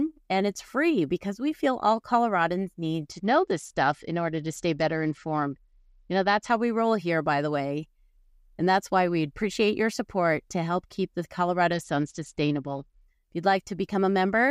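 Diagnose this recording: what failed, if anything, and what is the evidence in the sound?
Twice the speech turns dull and gritty, from 3.12 to 6.51 s and again from 11.73 to 13.02 s, with treble vanishing and a coarse noise riding underneath. This is a Bluetooth SBC bit pool drop at the codec stage: a congested link forced a far leaner encoding, consistent with the bit pool falling from about 31 to 10, near 77 kbps, starving the upper sub-bands.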